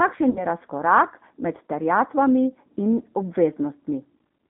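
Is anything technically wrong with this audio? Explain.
Yes, three faults affect this speech clip.

From start to end the sound is hollow, with a fixed dip in the upper range. This is channel delay (comb filtering): one channel lags the other by a fraction of a millisecond, and when the two are summed to mono the shared content cancels at evenly spaced frequencies. With a delay this short, the first notch lands around 3 kHz, so the cancellation sits right in the region that gives speech its presence.

Throughout, the speech is also band-limited and roughened, with a rough, synthetic edge that is plainly audible. This is the G.729 codec, here the G.729A variant. It rebuilds each 10 ms frame from a vocal tract filter, a pitch predictor and a handful of pulses rather than sending the waveform itself. The line band of roughly 200 Hz to 3.5 kHz removes the low body and the high detail, and the coarse pulse modelling, consistent with 8 kbit/s, gives the speech its grainy texture.

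From 0.30 to 0.45 s the speech is stretched into a sound that fades, then stays weak and distorted for a moment after it returns. This is VoIP packet loss concealed by the speech codec. About 60 ms of audio went missing, which fits a couple of lost packets. The decoder filled the gap by extending its last pitch and filter while lowering the gain, and because each frame builds on the previous one, recovery lags.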